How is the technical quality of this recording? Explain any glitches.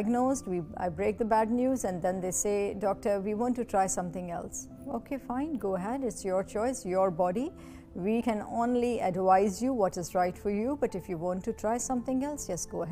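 One glitch stands out, at 8.2 s: compressed frames skipped. Roughly two whole frames of 23.2 ms, around 50 ms of audio, never reach the output, so the sound jumps forward.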